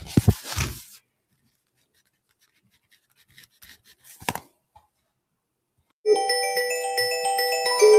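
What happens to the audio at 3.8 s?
At 3.8 s the sound is sinking away: steady and fading parts lose level and their decays are clipped short, while sharp onsets still get through. This falls inside a stretch of sound cut by the noise suppressor, running from 0.87 to 4.07 s, with about a second and a half of it actually pulled down and the deepest dip reaching about 20 dB. The suppressor judged this material to be noise and attenuated it harder than its surroundings.

Underneath that, the whole clip carries a pumping and thinning, with level swinging by about 5 dB as held tones and tails are pushed down and attacks spring back. That comes from a noise suppressor applied to music or sounds: a processor tuned for speech was left active, and it mistakes sustained tones, ambience and reverb for background noise. So it keeps trimming them, and the texture at 3.8 s flutters rather than sitting steady.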